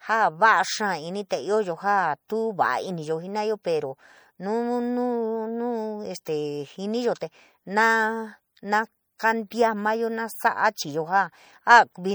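Speech throughout, with plainly audible MP3 compression damage, likely from a low bitrate around 64 kbps: weak detail swirls in and out, giving a watery texture and smeared attacks.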